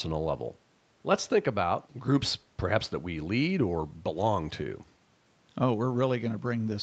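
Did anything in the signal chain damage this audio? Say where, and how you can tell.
No, nothing in the signal chain damaged this speech.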